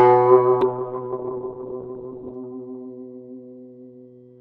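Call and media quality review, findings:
Call bitrate drop, 0.63 s to end: music turns watery and muffled, top end cut from 20 kHz to 4 kHz, consistent with a 32 to 6 kbps encoder fall. Not loss: no gaps.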